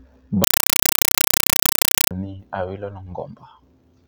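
From 0.44 to 2.11 s the speech is replaced by very loud, chattering static, rapping at about 31 bursts per second, each roughly 5 ms long. This is a compressed stream played as audio: an undecoded Dolby Digital (AC-3) bitstream, likely around 256 kbps, treated as ordinary samples.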